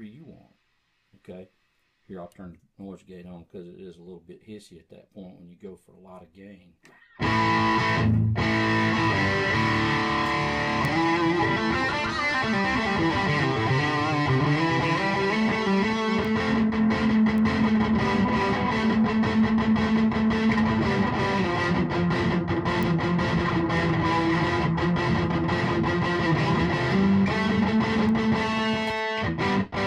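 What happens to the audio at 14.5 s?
Nothing goes wrong at 14.5 s; the audio runs through that moment intact, with no dropout, click, distortion or other fault.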